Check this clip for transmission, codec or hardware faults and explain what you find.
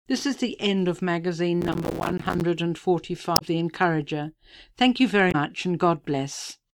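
Two kinds of fault are present: one burst of processor overload crackle and two short hits from damaged data in a compressed stream.

From 1.61 to 2.41 s there is processor overload crackle. The processor fell behind and missed dozens of buffer deadlines in a row. Each missed buffer became a short hole of silence with hard edges. The holes are each around 5 ms long, which fits a small buffer. Packed together, they sound like a gritty tearing crackle laid over the sound. It stops once the load eases.

At 3.33 to 3.42 s and again at 5.28 to 5.35 s there is damaged data in a compressed stream. Corrupted bytes reached the decoder, which misread those frames and lost sync. It then hunted for the next valid frame header. Each event lasts under a tenth of a second. Each is heard as a brief chirp, squawk, click or short hole.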